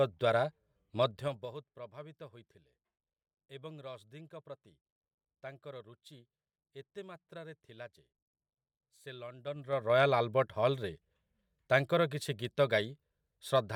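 From 1.02 to 1.62 s, just before "ପ୍ରଭାବିତ ହୋଇଥିଲେ", the level drops about 20 dB, and from 9.39 to 9.98 s it rises back about 20 dB. Both changes show zipper noise. The gain moves in unsmoothed steps of about 3 dB, around ten a second, so a fine ticking rides on the speech. The waveform envelope shows a visible staircase, and the spectrogram shows faint broadband vertical lines at each step.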